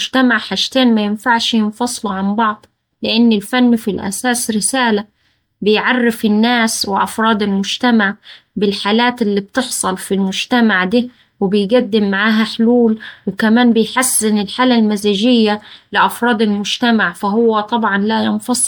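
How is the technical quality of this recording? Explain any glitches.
The technical quality is degraded throughout the speech by generation loss. The whole recording sounds swirly, smeared and hollow. Consonant attacks are blurred rather than crisp. Content stops at about 20.1 kHz, which fits an MP3 near 128 kbit/s. At that rate, a single pass would sound cleaner than this. The likely cause is repeated decoding and re-encoding, around ten times. Each pass quantises again on a shifted frame grid. The noise and spectral gaps stack up.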